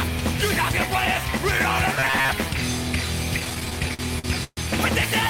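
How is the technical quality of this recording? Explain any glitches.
The recording has two audible glitches.

Robotic sound from repeated short buffers, 2.00 to 2.31 s: most of this stretch is likely a re-played fragment of about 7.5 ms, forcing a rigid, metallic 134 Hz buzz.

Repeated stalls (stutter), 3.39 to 4.60 s: late audio drained the buffer twelve times, and 338 ms of held sound, the longest hold 131 ms, makes the audio drag and stutter without losing any content.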